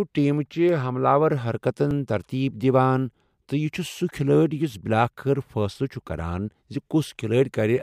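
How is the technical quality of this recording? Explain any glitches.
Two glitches in this speech clip, both quick skips. At 0.69 s and 1.91 s there's a small jump forward, losing a few milliseconds at the first and about 20 ms at the second. That's likely a dropped buffer (overrun): samples weren't collected before being overwritten, so the gap closes with no silence.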